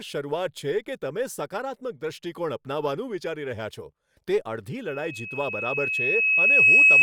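From 4.87 s, loudspeaker feedback squeal: a runaway 2.6 kHz loop tone builds for about two seconds into a horizontal spectrogram line towering over speech.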